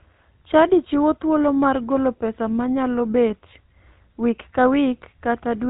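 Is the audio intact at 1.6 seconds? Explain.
No. GSM full-rate codec damage runs through the whole clip. The pulse-driven vocal-tract model, consistent with 13 kbps coding, cuts everything above 4 kHz and leaves buzzy, gravelly speech.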